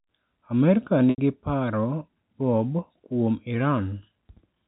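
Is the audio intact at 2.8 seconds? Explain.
Yes, the speech at 2.8 seconds is intact, with no dropout, click or other fault at that moment.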